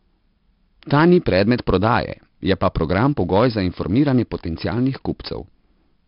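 Throughout, the speech carries heavy 4-bit ADPCM compression. Each sample is a coarse step from a prediction, so the error follows the level. Loud syllables get a gritty hiss and sharp onsets distort. Nothing sounds above 5.3 kHz. This points to about 44 kbps.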